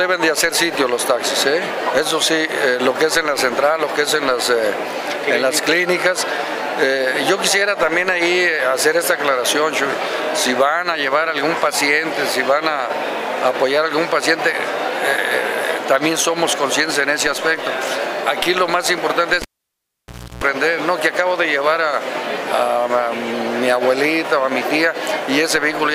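At 19.42 s a sharp pop cuts the sound to near silence for about 0.97 s, then a 0.33 s burst of 60 Hz mains buzz and a second pop bring it back at 20.44 s: a live cable pulled and plugged in, buzzing while only the tip touched.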